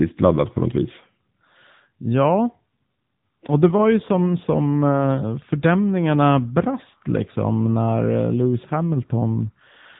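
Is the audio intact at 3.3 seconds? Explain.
No. At 3.3 seconds, as throughout the clip, the speech has passed through an AMR narrowband mobile codec whose vocal-tract model is driven by sparse pulses, at a coarseness that suggests a low rate near 8 kbps. Nothing above 3.8 kHz survives, so the voice sounds muffled, buzzy and plainly synthetic.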